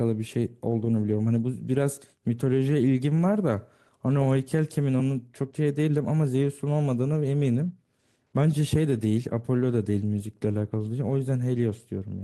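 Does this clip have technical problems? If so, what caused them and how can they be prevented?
No, no technical faults are audible.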